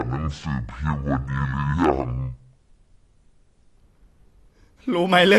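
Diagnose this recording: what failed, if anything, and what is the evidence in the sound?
Section at the wrong speed, 0 to 3.77 s: this happens at the editing or playback stage. For the first 3.77 s the speech runs at half speed, drawn out and deep, with its pitch dropped by around ten semitones, before returning to normal pace. Because tempo and pitch fall together, nothing was time-stretched. The samples were simply read out at half the intended rate, likely because a clock or sample-rate mismatch applied only to that section.

AAC compression, throughout the whole clip: this happens at the codec stage. The spectrum stops dead at 12 kHz, and the coding damage is plainly audible, with the speech sounding dull and smeared. This fits a low bitrate of around 32 kbps, most likely AAC-LC. At that rate the encoder lowers its bandwidth to save bits and quantises the remaining frequency lines so coarsely that detail is lost.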